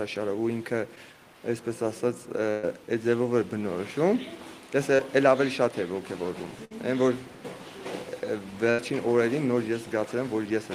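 At 0.95 s and again at 4.97 s there is short concealed packet loss. About 20 ms of audio failed to arrive, and the decoder extended the preceding sound to cover the gap before blending back. The result is a brief smear or wobble, too brief to fade.

Bursts of packet loss at 2.50 to 2.65 s, 6.65 to 6.72 s and 8.70 to 8.80 s are set apart by their length. About 120, 60 and 80 ms went missing, and the continued sound decays into a held buzz or thinning hiss before the audio jumps ahead.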